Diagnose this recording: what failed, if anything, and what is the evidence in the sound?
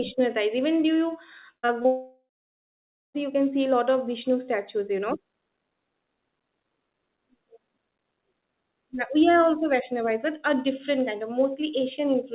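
Network stage first: a burst of packet loss at 1.58 to 1.65 s. About 60 ms of audio just isn't there. The receiver stretched the last sound into a short buzz or hiss that fades over roughly 50 ms, then jumps ahead to later audio.

Right behind it come two short concealed packet losses, at 1.67 to 1.70 s and 1.82 to 1.86 s, each about 20 ms missing. Both show up as a quick smear or wobble where the decoder patched the hole from the preceding sound and blended back in.

Then the big one: a long network dropout from 1.86 to 3.16 s, about 1.3 s gone. The concealment buzz or hiss fades, then there's roughly 0.9 s of dead air before audio resumes on "you can see a". A network outage is the likely cause. Everything's band-limited to 4 kHz, which fits a G.711 call path.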